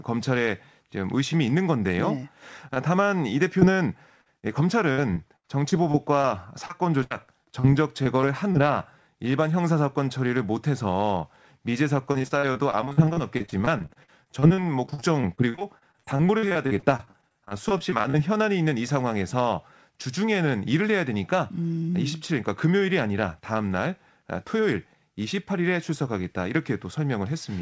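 Short concealed packet loss at 2.74 s: about 20 ms of the call arrived too late to decode, so the receiver extended the preceding sound and blended back, leaving a brief smear or wobble in the speech, with nothing above 8 kHz pointing to a wideband call codec.

Repeated packet loss (robotic sound) runs from 3.60 to 8.56 s and again from 12.12 to 18.16 s. Packets went missing over and over, and each hole was patched by continuing the last sound. The first stretch has gaps of up to 77 ms, about a tenth of it concealed. The second has dozens of shorter gaps, up to 44 ms, covering about a quarter.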